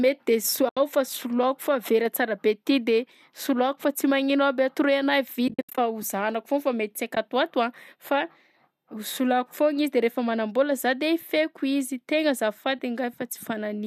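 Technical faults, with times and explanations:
0.69–0.77 s, 5.48–5.78 s, 7.15–7.17 s and 12.79 s: AAC frame loss with muting. The sound drops into soft-edged silent holes of 80, 220 and 20 ms, and a brief 10 ms dip. The decoder zeroes each missing frame, and overlapping windows fade the edges. The gaps step in about 10 ms units, which fits the short frames of the low-delay AAC likely in use. At 5.48 s the losses are scattered over 300 ms, and the longest run is roughly 70 ms.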